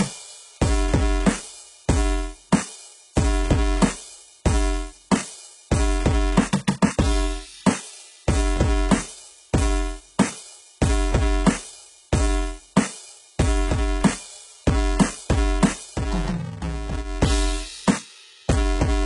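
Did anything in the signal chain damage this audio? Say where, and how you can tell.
Yes. At the buffer stage, a filter restarted on every block adds a 345 Hz buzz throughout the music. That fits 128-sample blocks each starting from silence.

At the codec stage, nothing is heard above 11.1 kHz, and the treble sounds metallic and gritty throughout. The likely cause is heavy HE-AAC compression at a very low bitrate.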